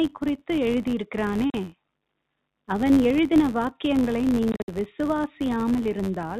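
A buzz runs through the whole clip at about 93.8 Hz. This is a filter restarted on every block. The filter loses its memory at each block boundary and begins again from silence. Each restart leaves a tiny transient, which fits a 512-sample buffer. The buzz rises and falls with the speech level.

At 1.50 s, the speech drops out for 40 ms, until 1.54 s. This is packet loss filled with silence. The gap points to two lost 20 ms packets. From 4.52 s to 4.68 s, holes are scattered across 160 ms, with 120 ms missing in all. The longest single run lasts 60 ms. The narrow telephone band of the G.711 coding can still be heard around the gaps.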